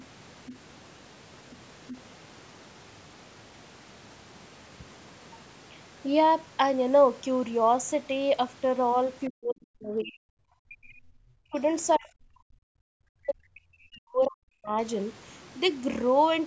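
Speech recording with two separate problems. In the first two seconds, faint scraps of the other side's voice leak through at 0.00–0.04, 0.46–0.58, 1.51–1.57 and 1.88–2.00 s, roughly 15 to 30 dB below the talker. The likely cause is a loudspeaker echo the canceller failed to remove. On a spectrogram these show as weak harmonic traces unrelated to the main voice. Later, the talker's speech is suppressed in double talk at 9.28–10.43, 10.83–11.56, 11.97–12.09 and 12.30–14.77 s. It drops by up to roughly 40 dB, and by less in the short 12 s gap, likely because the echo canceller turned everything down while both sides spoke. The waveform shows deep notches in the envelope, and the spectrogram shows the voice's energy and high end fading to near-blank in those spans. The call's microphone processing leaves nothing above 8 kHz.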